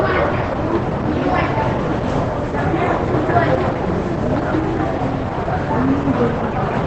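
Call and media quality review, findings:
Throughout: muffled, hoarse sound with nothing above 8.7 kHz. Likely Opus compression, consistent with its SILK speech mode near 12 kbps.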